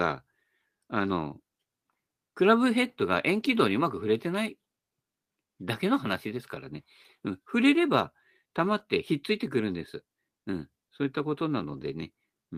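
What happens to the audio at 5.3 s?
Nothing goes wrong at 5.3 s; the speech there is intact, with no dropout, click, distortion or other fault.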